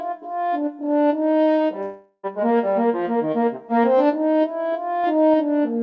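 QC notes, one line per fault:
1.82–2.26 s, long network dropout: The audio stops being real here for about 0.42 s. What fills the gap is a smeared continuation of the last sound, a buzz that fades out over roughly 0.41 s. Only a brief moment of near silence follows before the audio resumes, with the missing stretch simply gone. The likely cause is a run of lost packets that the receiver's concealment tried to cover. The band limit near 8 kHz stays the same throughout.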